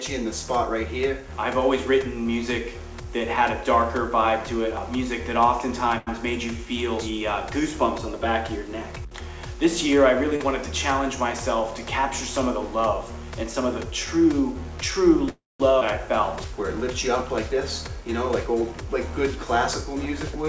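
The audio is band-limited, with nothing above 8 kHz, which fits a G.722 call path running at 64 kbps. Five faults stand out. A short stall from a late packet occurs from 5.98 to 6.09 s. A packet missed its slot and the jitter buffer ran dry. The receiver held the last sound for 88 ms, then resumed at the same point. Nothing is lost. The sound just hangs slightly too long and lags by 88 ms afterwards. Short concealed packet loss follows from 10.36 to 10.42 s. About 40 ms of audio never arrived in time. The decoder bridged the hole with 38 ms of synthesised continuation, built from the preceding sound, then blended back in. The result is a brief smear at that point, and whatever fell in the gap is gone. A call audio freeze runs from 15.29 to 15.62 s. The sound stretches into a fading tail, then drops to silence for about 180 ms. Playback then picks up exactly where it stopped. This 306 ms pause was likely caused by packets held up in transit, leaving the jitter buffer empty. 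No audio is missing, but the delay grows by 306 ms. A skip ahead comes right after, from 15.80 to 15.83 s. About a fifth of a second of audio is dropped. The two sides are joined almost directly, with only a tiny 13 ms patch. Playback lurches forward and the added delay shrinks. A jitter buffer speed-up covers 17.49 to 20.44 s. The buffer was holding more audio than it wanted. To trim the backlog, the receiver cut out many tiny pitch-period slices. In total, about a tenth of a second is removed. The sound plays at 103 percent speed with its pitch unchanged.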